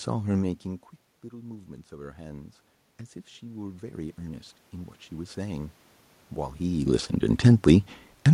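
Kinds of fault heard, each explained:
Automatic gain rising: The input dropped about 15 dB, so the gain control slowly boosted it. Speech and room noise swell together by about 5 dB at 1.3–2.62 s, then about 7 dB at 3.39–5.83 s.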